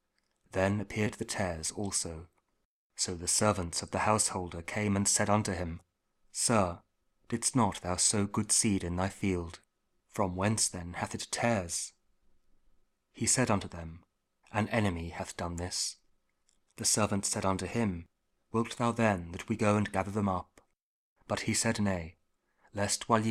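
There are no technical faults to describe.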